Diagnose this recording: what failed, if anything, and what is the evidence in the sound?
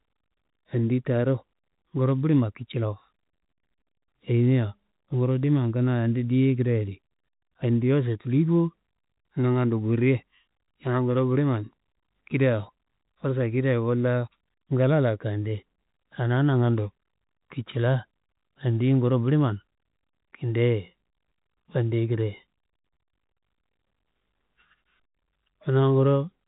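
Nothing failed: the speech comes over an ordinary G.711 telephone coding path, with the audio stopping at 3.8 kHz as that A-law channel should, and no stage shows a defect.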